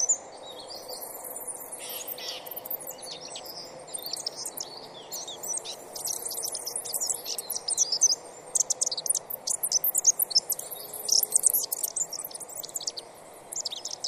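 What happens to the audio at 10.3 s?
At 10.3 s the audio is still being read two samples at a time (double speed), as it is across the whole clip. Pairs of samples are taken as single frames, so playback runs 2.0 times fast and an octave high.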